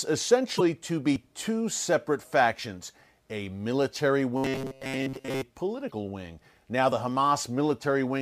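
A brief fault at 0.56 to 0.61 s is damaged data in a compressed stream. Part of the encoded stream was corrupted there, so the decoder misread those frames, lost its place and resynchronised at the next frame header.

At 1.16 s, just before "two separate factions a", a jump in the speech marks a dropped buffer (overrun). Roughly 20 ms of audio disappeared, likely because the program was late collecting samples and the hardware overwrote them, so the audio on either side was butted together with no gap of silence.

After "separate factions a military", from 4.37 to 5.43 s, the voice turns into a rigid, metallic buzz at a fixed pitch of 133 Hz that still loosely tracks the syllables. This is robotic sound from repeated short buffers, likely caused by audio arriving too seldom so the last 7.5 ms chunk was replayed over and over. That period sets the buzz pitch, and most of the real speech in that stretch was skipped.

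Another burst of damaged compressed data comes at 5.87 to 5.92 s, where the decoder again has to recover sync.

A final jump at 6.92 s is another dropped buffer of roughly 20 ms, with the surrounding audio spliced directly together.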